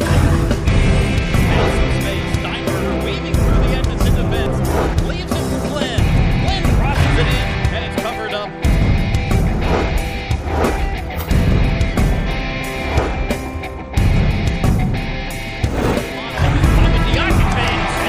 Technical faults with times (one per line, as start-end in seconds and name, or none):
none